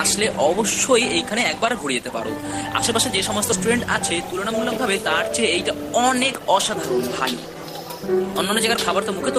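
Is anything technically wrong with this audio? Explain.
Yes. At about 3.52 s there is a skip ahead: roughly a fifth of a second of audio is missing, and playback jumps straight to later material with no gap. A chunk was dropped in transit or discarded when the jitter buffer overflowed, so the stream caught up by cutting forward. It is heard as an abrupt lurch. On a waveform or spectrogram, the two sides meet almost edge to edge, with a sudden discontinuity and no silent stretch between them.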